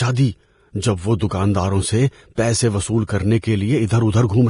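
Throughout the speech the treble has a hissy, grainy texture and stops dead at 10.6 kHz, with nothing above that. Voiced sounds are roughened and consonant attacks blurred. This is heavy damage from Vorbis compression, likely at a low setting, which fits a bitrate of around 30 kbps. The codec has cut the band and quantised the remaining upper spectrum so coarsely that its fine structure has become noise of similar energy.

Pre-echo occurs at four points. At 1.19 s, just after "دی جب وہ", a brief hiss of about 17 ms leads into an attack. Another, spreading about 30 ms, follows at 1.28 to 1.31 s. From 2.35 to 2.38 s, just before "پیسے وصول کرنے", the smear lasts about 26 ms. At 3.07 to 3.09 s, after "سے پیسے وصول", it lasts about 22 ms. In each case the quantisation noise meant for the loud onset has spread across the whole transform block into the quiet moment before it, so each attack is heralded by hiss and sounds softened.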